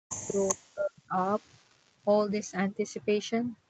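From the start to 0.37 s the speech dips hard, by around 40 dB at its deepest, most likely speech suppressed in double talk: with both ends talking, the echo canceller couldn't tell this talker from the loudspeaker echo and turned everything down. At 0.48 to 0.55 s there's a delayed copy of the voice, lagging by 389 ms and nearly as loud as the speech itself, likely an echo leak from a speakerphone whose canceller let it through. The same double-talk suppression comes back from 0.53 to 1.16 s, again pulling the speech down by around 40 dB at its deepest. From 1.23 to 1.75 s the echo leak returns at the same 389 ms delay, now very faint.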